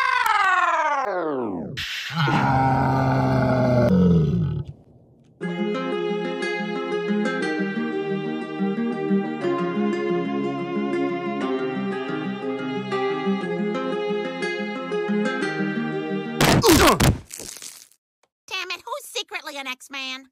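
Integer overflow strikes at 0.26 s and again from 16.41 to 17.07 s, where loud peaks exceed the integer limit by about 2 dB and wrap to the opposite sign, producing harsh cracks.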